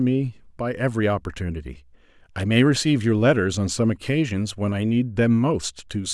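No technical faults are audible anywhere in this recording.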